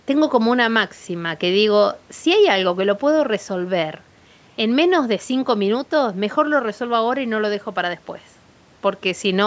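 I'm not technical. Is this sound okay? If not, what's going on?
Yes, there's nothing wrong with this sound. It went through a phone or video call's normal microphone processing, which trims away the very deepest bass and leaves nothing above 8 kHz, and that is expected for a call.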